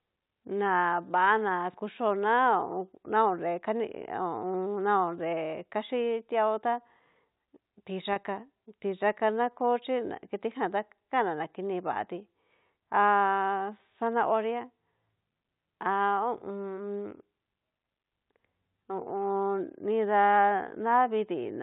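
At 8.13 s the speech has a brief gap, bridged by packet loss with pitch repetition. About 30 ms of audio never arrived, which fits a single lost packet. The receiver filled the hole by repeating the last pitch period it had. Because the loss is so short, there is no fade to silence. It comes across as a slightly held, buzzy moment before normal speech resumes at 8.16 s. The telephone band of the G.711 coding stays audible through it.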